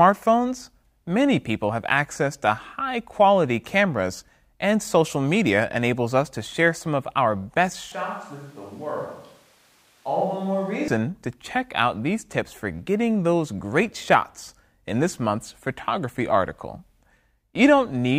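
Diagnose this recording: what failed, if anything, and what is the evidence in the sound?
After "some of our best", 7.92–10.88 s, speech goes roomy, thin and roughly 10 dB down: likely a switch to a distant microphone at capture.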